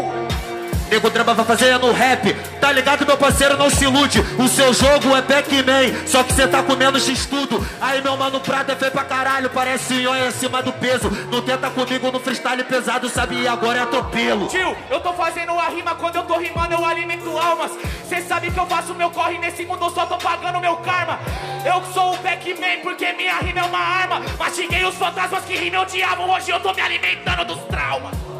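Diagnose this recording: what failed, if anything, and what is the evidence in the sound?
Digital gain was likely switched without a ramp: a sudden gain jump at 7.10 s drops sound and background noise together by about 5 dB.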